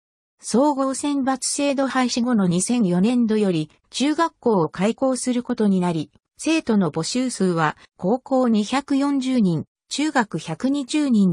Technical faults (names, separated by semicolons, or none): none